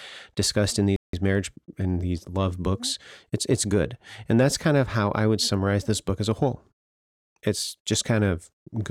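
At 0.96 s the speech cuts out abruptly and the output stays silent for about 170 ms, until 1.13 s, before continuing. This is a playback stall: the gap is a hard drop to silence in the middle of the flow rather than a fade or a natural pause. The likely cause is the player running short of buffered data, or its output thread being blocked, so nothing reached the device until it recovered.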